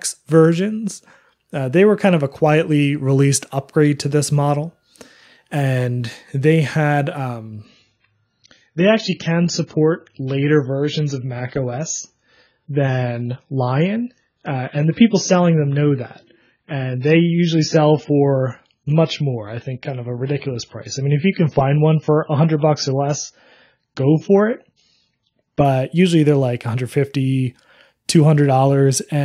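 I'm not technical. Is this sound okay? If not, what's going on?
No. From 7.65 to 25.65 seconds, the audio suddenly turns dull and fuzzy, with nothing above about 7 kHz. This is an adaptive stream at a lower bitrate: the connection likely slowed, so a smaller, rougher version played until quality returned.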